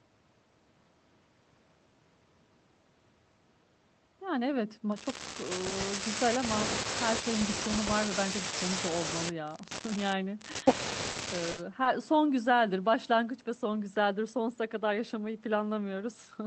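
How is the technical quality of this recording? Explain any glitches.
The recording has four network glitches, all packet-loss dropouts, clustered mostly between 11 and 12 seconds. The call codec's coding noise and top end stopping around 8 kHz point to Opus at roughly 32 kbps.

Short concealed packet loss happens at 5.69–5.73 s, 11.11–11.17 s and 11.83–11.87 s, covering 20, 40 and 20 ms. Audio arrived too late, so the receiver stretched the preceding speech across the gap, giving brief smears or wobbles.

A burst of packet loss hits at 11.51–11.59 s, with 60 ms gone. The decoder extended the last sound while fading it, producing a short held buzz or hiss before the speech jumps ahead.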